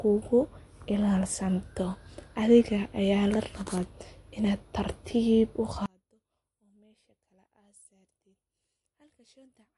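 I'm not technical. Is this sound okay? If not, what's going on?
No. For the whole clip the speech has a plainly audible processed quality, the watery, swirly sound of heavy squeezing, and there is no treble at all above about 11 kHz, so the top end sounds dulled. This is likely MP3 compression with too little data to spare: the encoder throws away weaker detail, which flickers on and off from moment to moment, and it cuts off the highest frequencies entirely.

From 5.86 seconds to the end, the speech suddenly almost disappears. Only a very quiet remnant is left. The likely cause is one channel inverted: the original recording had two channels, and one of them was flipped upside down. When the two were combined into a single channel, everything they shared cancelled out, leaving only the small differences between them.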